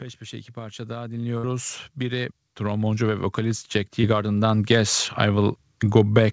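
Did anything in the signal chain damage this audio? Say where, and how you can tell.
Yes. The damage is in call processing, from automatic gain rising between 0.19 and 4.98 s. The speech and the background noise floor swell together by about 19 dB over nearly five seconds. A gain control judged the input too quiet and kept turning it up. On a waveform the envelope widens steadily across that span, and on a spectrogram the gaps between phrases brighten along with the speech.

The network stage shows a burst of packet loss from 1.38 to 1.44 s. About 60 ms of speech is gone. The receiver filled roughly 53 ms of it by extending the last sound and letting it decay, so it plays as a held sound that fades before the speech picks up further along. A spectrogram shows frozen content tapering off, followed by an abrupt jump in content.

A second, shorter loss appears as short concealed packet loss at 4.01 to 4.04 s. 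About 20 ms never arrived in time, and concealment synthesised roughly 19 ms to cover it before blending back into the real signal. It sounds like a brief smear or wobble. On a spectrogram it is a thin vertical slice where the fine detail blurs, with the 8 kHz ceiling of the call codec continuing unchanged through it.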